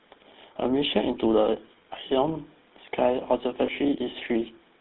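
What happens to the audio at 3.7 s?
At 3.66 to 3.69 s the sound briefly turns into a rough, metallic ring, held for about 30 ms before normal audio resumes. These are lost GSM frames: the decoder had no valid data, so it reused the last good frame's settings, which fits a single dropped 20 ms frame. Under this, as throughout the clip, the GSM full-rate codec at 13 kbps gives the speech a plainly audible buzzy, gravelly roughness, with the band limited to roughly 200 Hz to 3.7 kHz.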